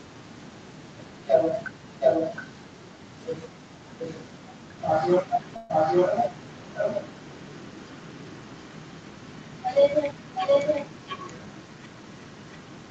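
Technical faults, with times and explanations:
0.00, 2.00–2.65, 3.99–4.38, 4.78–4.96 and 5.20 to the end, echo leak: a second copy of the speech trails the original by about 0.72 s. It is barely audible at the start, as loud as the direct speech at 2.00–2.65, clearly weaker around 4 s and 4.8 s, and only slightly below the speech from 5.20 onward. This is likely a far-end loudspeaker leaking past an incomplete echo canceller. A reverberant room smears sound continuously, but here the copy arrives as a distinct delayed repeat.
5.56–5.71, call audio freeze: the sound stalls for about 132 ms. The last sound is held as a fading buzz or hiss rather than dropping to silence. When the audio resumes, it continues exactly where it stopped, so nothing is lost and the clip is simply delayed by the length of the hold. This likely comes from held-up packets emptying the jitter buffer. A packet loss would instead skip part of the audio.
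10.82–11.96, jitter buffer speed-up: the speech plays at about 111% speed while the pitch stays unchanged, so it sounds briefly hurried. The receiver cut short pitch-period slices, about 150 ms in total, to drain excess buffered audio and bring the delay back down. Because the pitch holds steady, this differs from a clock or sample-rate error, which would raise the pitch along with the pace.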